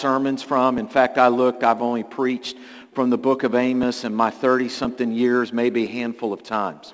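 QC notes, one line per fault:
0.78 to 6.88 s, periodic USB or driver dropouts: something stalls the USB link or audio driver about once every 1.01 s, and each time roughly 10 ms of audio is skipped outright rather than padded with silence. The stream jumps forward at the splice, leaving about seven evenly spaced ticks that are audible only over signal. They sit on top of a call-path band that stops at 8 kHz, which fits a wideband codec such as G.722.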